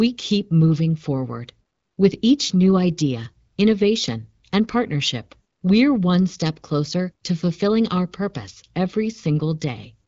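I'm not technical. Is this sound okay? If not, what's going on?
Yes, no faults here.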